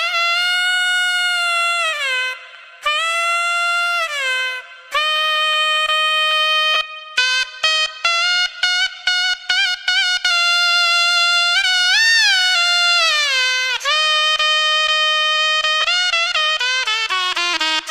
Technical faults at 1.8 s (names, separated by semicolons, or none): none